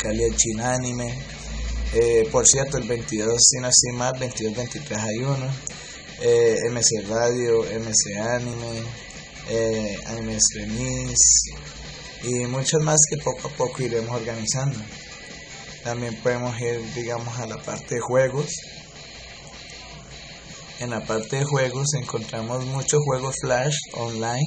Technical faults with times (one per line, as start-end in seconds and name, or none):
2.54 audio missing between chunks
8.53 audio missing between chunks
14.52 audio missing between chunks
20.51 audio missing between chunks